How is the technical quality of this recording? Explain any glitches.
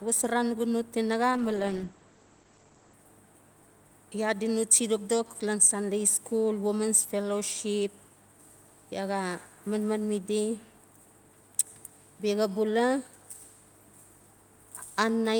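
The quality takes one clear hit early on; there's a call bitrate drop from 1.32 to 3.01 s. The encoder got starved of bits, so for about 1.6 s the speech turns coarse and watery, and the top end collapses from 20 kHz to 8 kHz, which fits a fall from roughly 48 to 12 kbps.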